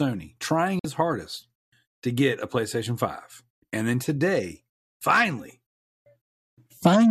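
At 0.79 to 0.85 s, the receiver lost the signal or rejected frames that failed their checksum and muted: a digital broadcast dropout, fading out in 3 ms and leaving a brief hole in the speech.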